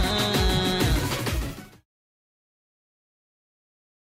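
Nothing stood out on listening, apart from a smooth, deliberate fade-out that begins around 1 s and is complete by 1.86 s with no click or hard edge.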